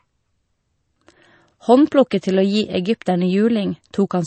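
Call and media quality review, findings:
Watery, swirly texture throughout the speech clip, nothing above 8.3 kHz. Likely MP3 compression at a low bitrate, consistent with around 32 kbps: encoder cuts treble at a fixed frequency and zeroes weak frequency lines, which flicker between frames.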